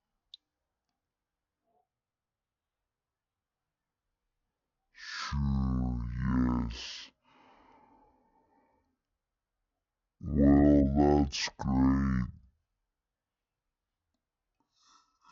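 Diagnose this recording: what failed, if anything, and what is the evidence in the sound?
Stereo read as mono, present throughout the recording. The speech plays at half speed and a full octave low, a drop of 12 semitones, so every syllable is stretched and the voice sounds deep. The failure sits at the sample-format conversion stage. Interleaved left and right samples were taken one after another as a single channel, which doubles the length of the stream at the same rate and leaves a fainter mirrored copy in the upper half of the spectrum.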